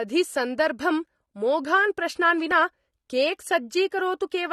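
From start to end, the speech sounds dull and smeared, with plainly audible damage. Nothing sounds above 12.5 kHz. Sibilants have a fizzy, warbling texture. The likely cause is AAC compression at a low rate, which fits about 32 kbps.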